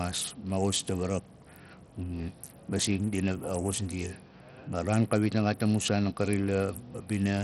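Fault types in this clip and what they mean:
Bluetooth SBC compression: The speech sounds like it likely went through SBC, the basic Bluetooth codec that splits the signal into a handful of wide bands and hands out bits without modelling what the ear notices. The damage here is heavy and runs the whole clip. There's nothing above about 14.1 kHz, and the top that's left sounds gritty and flickery, which fits a starved bit budget somewhere around 64 kbps.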